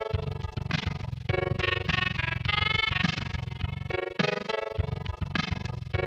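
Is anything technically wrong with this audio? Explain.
Yes. Throughout the clip there is overlap-add ripple: the frames were windowed and rejoined with an overlap whose gains don't sum evenly, so the level dips by about 60 dB once per frame, around twenty times a second, giving a harsh, fast flutter over the whole sound.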